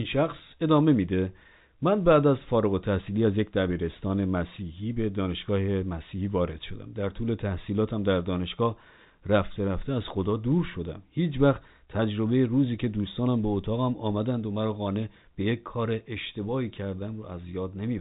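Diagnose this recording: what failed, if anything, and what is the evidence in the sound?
Nothing has failed: the speech has come through G.711 telephone coding, which is why its band stops at about 3.8 kHz, and no fault can be heard anywhere in the signal.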